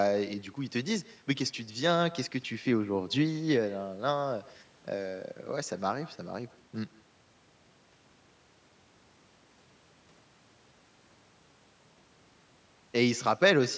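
From start to finish, every phrase of the speech is trailed by a faint, thin copy arriving roughly 150 ms later, about 22 dB below the direct sound. This is echo with no canceller: the far end played the call through a loudspeaker, its microphone caught that playback, and nothing subtracted it before it was sent back across the network. The returning copy is band-limited like the rest of the call audio, which stops around 8 kHz.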